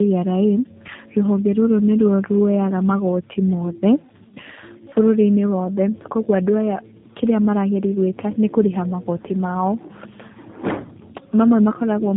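From start to finish the speech carries tandem speech coding: it went through AMR-NB, then G.711, then G.729A, so two low-rate speech coders stacked their errors. It sounds rough, muffled and warbly, with nothing above 3.8 kHz.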